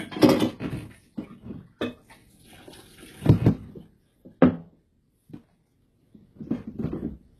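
From start to finish the top end has that synthetic sheen, and the cause is likely HE-AAC compression at a very low bitrate, something in the region of 16 kbps. The codec keeps only the lower spectrum properly and fakes the treble by copying lower bands upward under a rough envelope, so the highs sound bright but don't match the real harmonics. Sharp sounds come out gritty and metallic.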